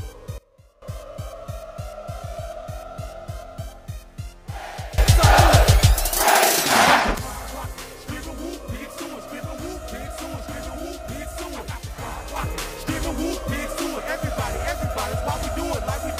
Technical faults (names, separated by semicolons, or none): sudden gain jump